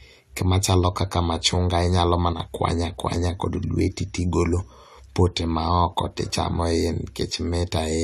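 At 2.33 s one side of the stereo feed likely stopped delivering samples for about 70 ms, until 2.40 s, a one channel drops out fault. Once the two sides are summed to mono, everything the channels shared falls abruptly by about 6 dB, and anything carried only by the lost side vanishes. The speech therefore dips suddenly and briefly in loudness, then snaps back to full level when the channel returns.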